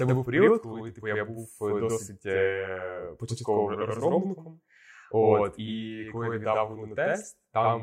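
Right from the start there's a channel delay doubling: one side runs about 85 ms late, and once the two are summed to mono you hear every syllable twice, like a slap echo at equal level. That lag fits a 4096-sample buffer holding one channel back.

At 0.47 s there's a quick blip from damaged data in the compressed stream. A patch of the encoded data got corrupted, so the decoder lost sync and had to hunt for the next good frame header.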